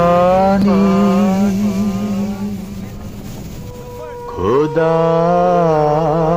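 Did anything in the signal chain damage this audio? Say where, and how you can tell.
Yes. The damage sits at the codec or storage stage: damaged data in a compressed stream. From 0.59 to 0.64 s, a span of about 50 ms, a brief glitch breaks into the sound and then clears. That short glitch is the signature of corrupted compressed frames: the decoder hits bytes it cannot parse, loses frame sync, and outputs garbage or nothing until it locks onto the next valid frame header and resumes clean decoding.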